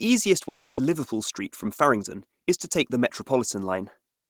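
From 0.48 to 0.79 s a long network dropout likely occurred. A fading buzz fills the gap and about 200 ms of speech is lost, unlike a brief clipped packet loss. From 0.88 to 2.25 s, just before "is to take the", a jitter buffer speed-up runs speech 5% faster at unchanged pitch, trimming roughly 70 ms. It sounds hurried rather than chipmunk-like, unlike resampling.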